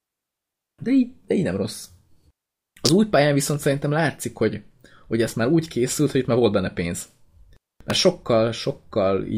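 At 2.86 to 2.89 s, just before "új pályán viszont szerintem", a sharp snap cuts in, peaking around -5 dBFS. A second, far briefer tick follows at 7.90 s, somewhat quieter. Both are most likely an electrical switching spike: a nearby switch, motor or static discharge arcing and coupling into the line. Unlike a digital dropout or edit click, the speech underneath runs on unbroken, with the crack simply layered over it.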